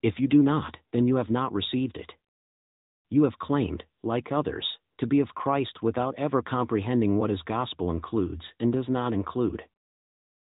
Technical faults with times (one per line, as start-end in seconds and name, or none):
0.00-10.54 AMR narrowband mobile codec